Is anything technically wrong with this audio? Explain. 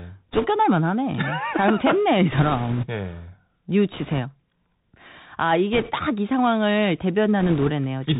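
Yes. Throughout, the Bluetooth CVSD headset codec limits speech to below 4 kHz. Its one-bit adaptive steps, consistent with a 64 kbit/s stream, leave granular hiss, scratchy s sounds and plainly audible slope distortion. Bit errors on a Bluetooth voice link, at an error rate of a few percent, add bursts of rushing, crackly noise without loud clicks at 0.31–0.47 s, 2.32–2.87 s, 3.92–4.20 s, 5.73–5.92 s and 7.40–7.71 s, because each flipped bit nudges the signal only slightly.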